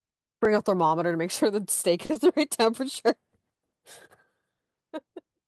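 At 0.45 s a repeated buffer occurs: fresh audio arrived late, so the device replayed a piece of about 2.7 ms, which fits a 128-sample buffer, twice more. The hard joins make a brief click or buzz. At 2.05 s a short stall from a late packet empties the jitter buffer, so the receiver holds the last sound for 40 ms until the packet arrives. Nothing is lost, but the speech drags briefly with a slight buzz or dip. Right after, at 2.13 to 2.17 s, a short concealed packet loss drops 20 ms before decoding. The receiver extends the preceding sound across the gap and blends back, giving a brief smear or wobble. At 2.94 s another repeated buffer replays a 2.7 ms piece three extra times, producing a slightly longer click-like buzz.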